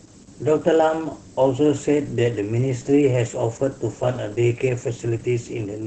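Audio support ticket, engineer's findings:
Steady, thin hiss across the whole clip, brightening sharply toward the top of the band and sitting only about 15 dB under the speech. Low bit depth with noise shaping: requantisation consistent with about 7 bits, rounding error pushed upward in frequency.

Speech muffled, hoarse and faintly robotic throughout, with no content above 8.9 kHz. Opus voice compression, heavily damaged: the sound points to the SILK linear-prediction coder in wideband mode at around 10 kbps with 20 ms frames, excitation coded coarsely.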